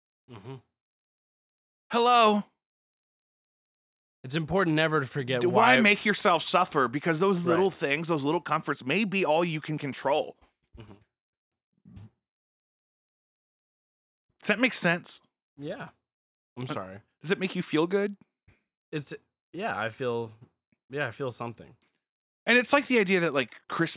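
Speech recording with no technical faults to report.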